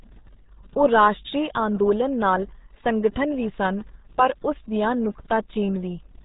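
From start to finish the speech carries the RealAudio 14.4 codec's damage. Nothing above 3.8 kHz survives, and the heavy coding leaves the voice muffled and gargly, which fits the 8 kbit/s RealAudio 1 codec built for dial-up modems. A plain telephone band-limit would sound narrow but clean. Here the low data rate also smears the remaining sound into a bubbling, watery texture, and that distinguishes it from simple filtering.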